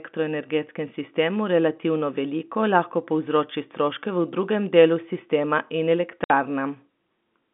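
At 6.24 s, after "drugem delu sistema in", packet loss filled with silence leaves a 60 ms hole. That fits three lost 20 ms packets. Its edges are hard.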